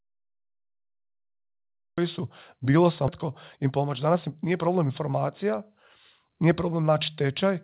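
The audio is digital silence until 1.98 s, then a cut-off start: the speech begins abruptly mid-sound just before "su bilo", with no natural attack, unlike a fade-in or soft onset. At 3.08 to 3.10 s, right after "su bilo", comes a skip ahead. Roughly a second of speech was dropped and the two sides are joined with no gap, so it sounds like a jump rather than a dropout with silence or concealment. From 3.24 to 4.90 s a jitter buffer speed-up runs the speech at about 108% by trimming short pitch-period pieces, around 150 ms in total. It sounds hurried but keeps its pitch, which tells it apart from a resampling speed change. Throughout, the G.711 A-law call path limits everything to below 4 kHz.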